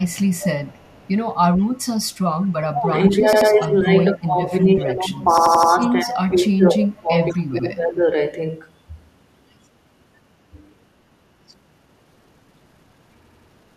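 An echo canceller on the far loudspeaker end likely failed to remove everything its microphone picked up, so an echo leak comes back at a 194 ms delay. From 0.08 to 1.67 s a faint, lagging copy of the speech trails the original, about 20 dB down. Inside that stretch, at 0.85 s, playback ran short of new audio and the last buffer was played again: a repeated buffer, one extra play of an 85 ms piece, which fits a 4096-sample buffer. It is heard as a short stutter with a hard seam.

From 2.61 to 8.03 s both ends talk at once, and the echo canceller likely could not tell the local talker from the loudspeaker echo, so it turned everything down. This is speech suppressed in double talk. The speech dips and thins in patches totalling roughly 4 s, falling by as much as about 20 dB. Within that span the echo leak returns in brief scraps at 3.07 to 3.17 s, at 6.08 to 6.21 s (louder, about 10 dB below the speech) and at 7.33 to 7.39 s (about 30 dB down). 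An 85 ms piece stutters again at 3.33 to 3.50 s with two extra plays, at 5.38 to 5.72 s with four, and at 7.60 s with one. A final repeated buffer at 13.23 to 13.48 s plays three extra times.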